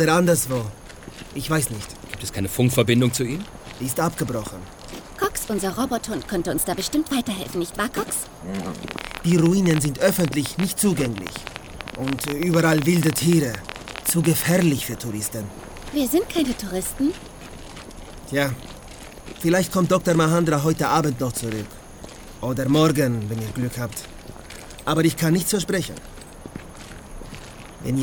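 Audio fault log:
8.88–14.63 s, train of clicks: some seventy sharp pulses of nearly identical shape at about 13 per second, unevenly spaced, rising well above the sound and ticking through pauses too. Their matching shape and sustained run set them apart from random crackle. The likely cause is interference from nearby equipment or a faulty connection or power supply.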